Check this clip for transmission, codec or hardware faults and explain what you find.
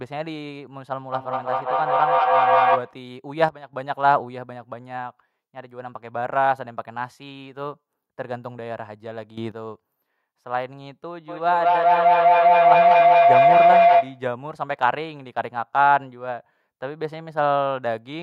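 Three kinds of fault are audible in this speech clip: a two-device feedback echo, two sudden gain jumps, and a full feedback howl.

From 1.12 to 3.05 s there is feedback echo between two devices. A second device in the room replays this signal, and its microphone returns it past an echo canceller that only handles its own playback. Each word recurs about every fifth of a second, growing thinner and more ringing, and peaks at about 5 dB above the speech. On a waveform this shows as evenly spaced repeated bursts. On a spectrogram the same shapes stack at that interval with progressively narrower bandwidth.

Two sudden gain jumps follow. From 3.49 to 3.73 s the level drops by about 12 dB, and from 9.38 to 9.52 s it rises by about 12 dB, with the voice and the noise floor shifting together. The likely cause is a digital gain change applied without a ramp. On the waveform the envelope steps abruptly. 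On the spectrogram every frequency brightens or darkens in the same instant.

From 11.28 to 14.34 s a feedback howl builds. The same two-device loop, with a delay of roughly a fifth of a second, gains level on each trip until the repeats collapse onto a tone around 700 Hz that reaches about 9 dB above the speech. On the spectrogram it appears as a bright horizontal line. On the waveform it is a swelling near-sinusoid.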